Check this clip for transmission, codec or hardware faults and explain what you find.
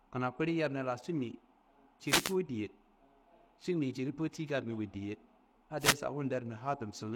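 Two wireless microphone noise hits interrupt the speech, from 2.05 to 2.36 s and from 5.79 to 5.96 s. The FM radio link fades as reflections cancel. Receiver noise then surges as a brief swish of static over the voice.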